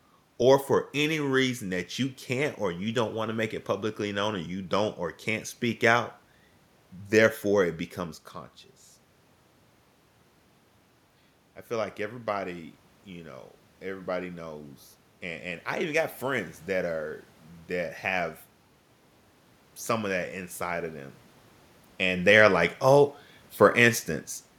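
At 13.81 s, right after "like everybody you know", automatic gain rising sets in and continues to 17.04 s. The gain control judged the input too quiet and ramped its gain up by about 4 dB over roughly three seconds. The voice and the room noise behind it swell together, which separates this from the level shifts near 8 s and 22 s, where only the voice changes as the talker moves.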